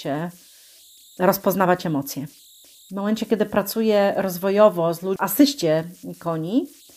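Converter idle tones run through the whole recording. The delta-sigma converter was evidently working without dither, so when the speech is quiet its output settles into repeating bit patterns, and those patterns become audible tones. Here they sit around 4 kHz, a thin whistle most noticeable in the pauses between phrases. Under the softer speech they turn into a fine grainy hiss, with the error about 31 dB below the signal.

A CD skip occurs at 5.16 s. A knock or a flaw on the disc made the laser jump to a different turn of the spiral. The player muted briefly, for roughly 5 ms, and then resumed from the new position. This is heard as a small tick followed by an abrupt discontinuity, with the speech jumping to another point rather than continuing smoothly through that instant.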